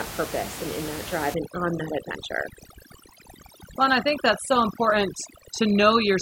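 From 1.34 s, after "and in that drive", overdone noise removal lasts to the end. Bands near the room noise, about 12 dB below the speech, are gated off, leaving twinkling specks. Unlike codec artefacts, the gaps track the noise floor.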